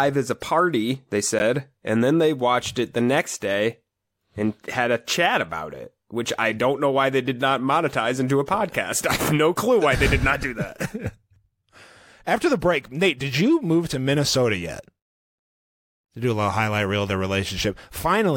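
At 1.39 to 1.41 s, right after "as a party they" and before "and then they watched", there is a corrupt frame decoded. A single compressed frame arrived with damaged bits. The decoder played it anyway. Misread codes and gains put energy in the wrong frequency bands for the length of that frame. The result is a short chirp, squeak or burst of noise cutting into the speech. It peaks loud, around -10 dBFS.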